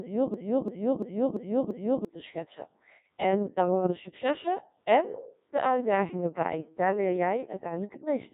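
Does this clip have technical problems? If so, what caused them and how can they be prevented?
Yes. The Codec 2 vocoder runs throughout. Resynthesising the speech from pitch, voicing and an envelope makes it robotic and buzzy, with nothing above 3.8 kHz on a spectrogram, which fits its 1.6 kbit/s mode. To prevent this, use a higher-rate waveform codec wherever bandwidth allows.

A system hang loop runs from 0.34 to 2.05 s, just before "te schetsen". The same 341 ms segment repeats five times at about 2.9 Hz, a skipping-record repetition that fits a 16384-sample buffer. The waveform shows identical repeated blocks, and about one and a half seconds of audio is lost. To prevent this, fix the driver or system stall and have the audio device output silence when its buffer is not refilled.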